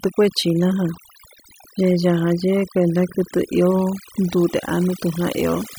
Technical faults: overdone noise removal

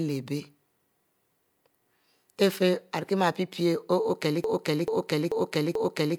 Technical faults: broken-record loop

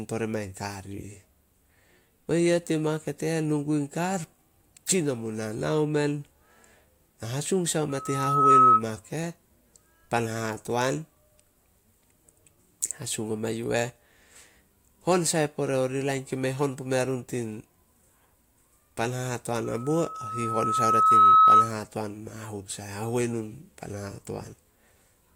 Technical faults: loudspeaker feedback squeal

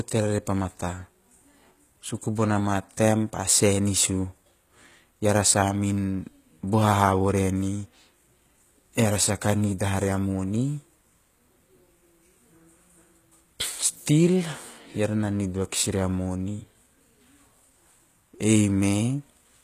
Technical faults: HE-AAC compression

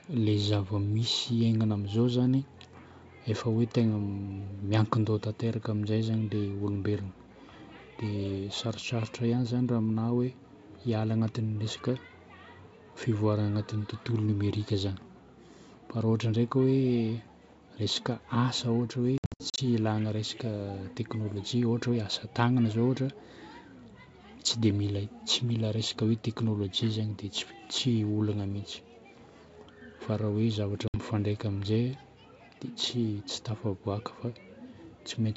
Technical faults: wireless microphone noise hit; packet loss on an ADPCM call

